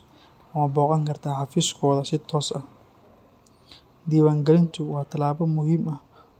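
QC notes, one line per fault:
Throughout, clock drift between sender and receiver: the sender's clock runs about 2% slow, so the receiver's buffer keeps draining; the waveform shows small duplicated slices at uneven spacing.
0.46–5.54 s, repeated timing corrections: short pieces keep getting repeated, stretching this span to 98% speed and adding roughly a tenth of a second, heard as slight hiccups; the spectrogram shows brief duplicated frames.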